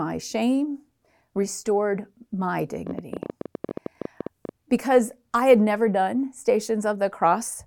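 A speech recording carrying a train of clicks from 2.87 to 4.50 s, between "shame restored my" and "because I had never": about twenty similar pops at an uneven pace near 13.6 per second, peaking about 10 dB above the speech, likely from electrical interference or a faulty connection or power supply.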